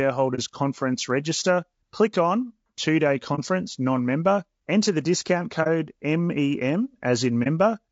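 Low-delay AAC compression runs through the whole of this speech recording: the voice sounds rough and grainy, with noise filling the gaps between harmonics and a thin, artificial top band. This is likely from AAC-ELD at a low bitrate, around 32 kbps, where short frames resolve pitch poorly. AAC frame loss with muting opens brief holes at 0.35 to 0.39 s, 3.35 to 3.39 s, 5.63 to 5.67 s and 7.43 to 7.48 s. Each gap fits a single lost frame whose spectrum the decoder zeroed, so the sound fades out and back in across the overlapping windows.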